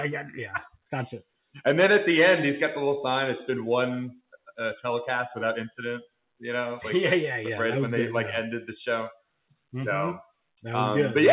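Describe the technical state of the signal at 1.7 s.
At 1.7 s the audio is intact, with no dropout, glitch or distortion, only the narrowband sound of the call path, where nothing reaches above 4 kHz as expected of G.711 A-law at 64 kbps.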